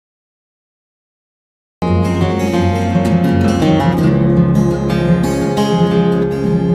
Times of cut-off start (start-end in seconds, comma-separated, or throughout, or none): 0.00-1.82